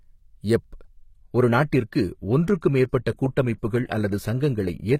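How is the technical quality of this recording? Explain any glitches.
The quality drops partway through. From 1.02 s to the end, the speech plays as an adaptive stream at a lower bitrate. The connection slowed, so a leaner version took over with no gap. Nothing remains above 14.9 kHz, consistent with a switch to roughly 20 kbit/s HE-AAC.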